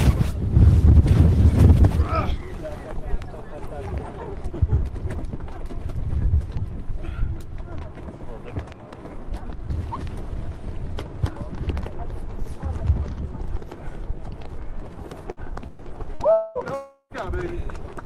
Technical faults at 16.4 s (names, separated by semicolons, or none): long network dropout